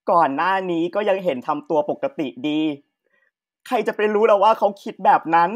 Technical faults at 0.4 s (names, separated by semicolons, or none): none